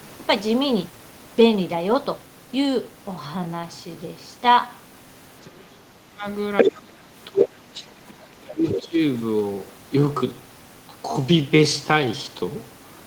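From 2.79 s to the end, the speech slows abruptly to 0.634 times its original pace while the pitch stays put. This is a time-stretched section, likely produced by software lengthening the audio to fit a target duration by repeating short segments rather than resampling. The stretched stretch drags, with syllables drawn out.

Within that section, a second voice intrudes five times: 5.42 to 5.6 s at about 30 dB below the main speech, 6.57 to 6.7 s at about 5 dB above it, 7.39 to 7.45 s at about 5 dB below, 7.74 to 7.85 s at about 15 dB below, and 8.69 to 8.88 s at about 5 dB below. This is the other side's voice leaking through. The likely cause is far-end audio from the talker's loudspeaker reaching the microphone without being fully removed by the echo canceller. The fragments are brief, and the loudest, at 6.6 s, briefly sits over the talker.

Overlapping those intrusions, the talker's own voice is speech suppressed in double talk three times: 5.66 to 6.25 s, dipping by up to about 30 dB; 6.63 to 7.67 s, by up to about 20 dB; and 8.44 to 8.98 s, by up to about 20 dB. 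The likely cause is the echo canceller failing to separate near-end speech from the loudspeaker echo while both sides talk, and attenuating everything. The voice drops for roughly half a second to a second each time.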